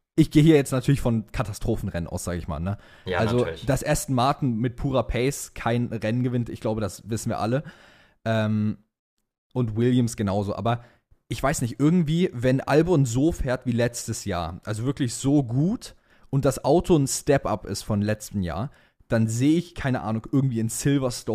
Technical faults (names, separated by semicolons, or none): none